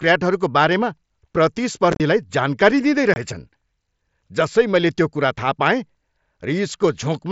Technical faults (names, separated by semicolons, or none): unconcealed Bluetooth headset packet loss